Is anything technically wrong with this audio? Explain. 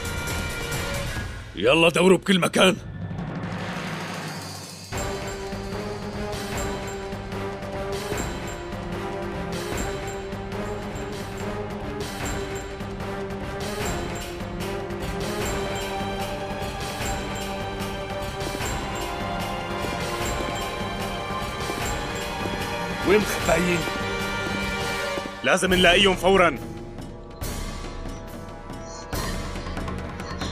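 Yes. There is one fault. At 12.85 s a single sharp click cuts through the sound. It is most likely dropped samples. A tiny stretch of the stream, well under a millisecond, goes missing. The waveform then jumps straight from one value to a later one. That abrupt step produces the click. Nothing audible is lost, because the gap is far too short. It appears as a thin vertical line across the spectrum.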